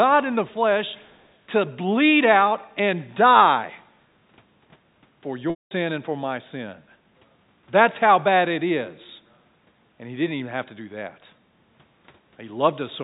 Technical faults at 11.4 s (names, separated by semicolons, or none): background gated by the echo canceller